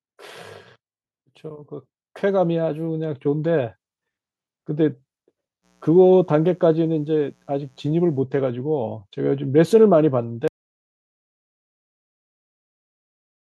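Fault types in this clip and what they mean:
Automatic gain rising: the gain control judged the input too quiet and raised its gain, so speech and background swell together by about 7 dB from 1.48 to 3.62 s.
Mains buzz: switching spikes from 60 Hz mains leak into the signal path, adding a faint, steady, raspy buzz under the speech from 5.62 to 8.23 s.
Audio dropout to silence: the input was likely lost, perhaps through a disconnection or mute, and silence was written; from 10.48 s the speech cuts to total silence until the end.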